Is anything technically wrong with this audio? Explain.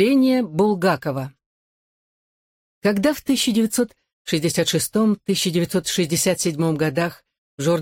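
No, the audio shows no technical faults.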